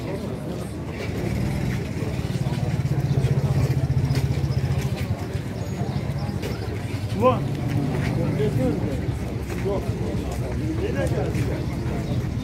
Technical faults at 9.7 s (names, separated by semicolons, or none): clock drift buffer slips